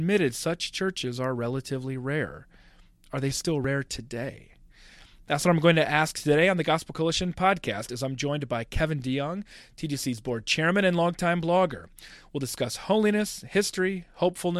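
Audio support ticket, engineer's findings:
Audio missing between chunks: brief skips at 4.53 s and 9.52 s, about 10 ms each, 5 s apart; likely chunk-boundary loss; waveform shows abrupt splice, spectrogram a thin vertical line.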